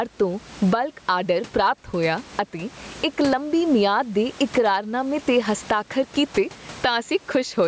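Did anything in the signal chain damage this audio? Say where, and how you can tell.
Yes. Gain pumping runs through the whole speech clip. The gain swings by around 20 dB. The likely cause is input gain set far too high, with a fast limiter clamping each peak.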